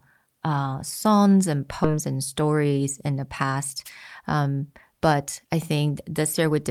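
A skip ahead occurs at 1.84 to 1.92 s, right after "uh songs and". Roughly a third of a second of speech never plays. Later audio was already queued, so playback jumped straight to it instead of pausing, which points to a stretch lost in transit or discarded by an overfull jitter buffer. The two sides are stitched together through a very short join of about 13 ms. The speech lurches forward abruptly, as if part of a word had been clipped out.

A wireless microphone noise hit follows at 3.85 to 3.90 s, just after "in the past". For about 50 ms, the analogue FM radio link from the microphone briefly faded as reflected signals cancelled each other at the receiver. The receiver's own noise surged up over the voice. It comes through as a quick swish of static laid across the speech, short enough to sound like a single brief burst rather than a sustained dropout.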